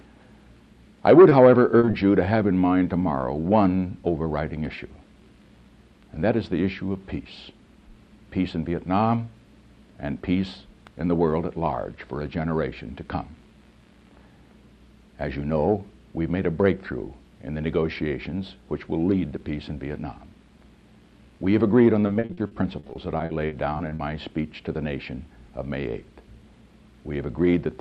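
Right at the start there's short concealed packet loss: a 20 ms hole at 1.29 s, then a cluster at 1.79 to 1.85, 1.85 to 1.89 and 1.91 to 1.95 s. The receiver papered over each by extending the preceding sound, so you get quick smears or wobbles.

Later, from 22.07 to 24.01 s, it's repeated packet loss, the robotic sound kind. Around sixteen holes, none longer than 40 ms, add up to about 480 ms patched, a quarter of that stretch, so it goes choppy.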